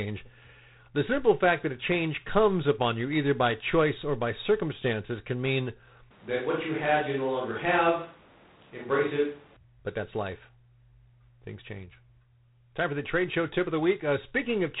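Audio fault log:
Throughout: G.726 ADPCM. The speech was coded at what sounds like 24 kbit/s, storing only a few bits per sample of the difference from an adaptive prediction. With so few bits the quantisation error is large, so a plainly audible harsh, rasping hiss rides on the speech and swells and falls with its level. The band stops near 3.9 kHz, leaving the speech muffled and telephone-like with no air or sibilance above that point.
6.11 to 9.57 s: switch to a distant microphone. The close microphone's signal drops out for about 3.5 s, and the sound is most likely picked up by a microphone further away. The speech turns suddenly roomy and hollow and loses bass, though its level barely changes. Background room noise rises to roughly 30 dB below the speech. At 9.57 s the close, drier sound returns just as abruptly.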